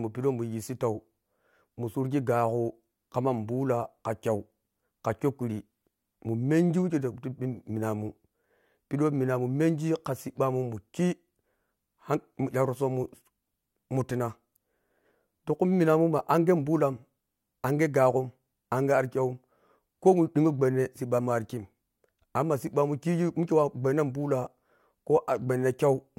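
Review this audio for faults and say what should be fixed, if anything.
Nothing here needs fixing, since no faults turn up anywhere in the recording.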